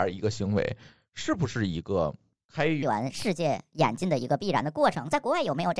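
A speech clip that plays at normal speed until 2.83 s, then switches to a wrong sample rate for the rest of the audio. From that point the speech runs about 1.38 times too fast and sits roughly 5.5 semitones higher, so it sounds hurried and chipmunk-like. That ratio fits 16 kHz material being clocked out at 22 kHz with no resampling. On a spectrogram, harmonics and formant bands jump upward and syllables squeeze closer together, while the waveform's bursts become visibly shorter.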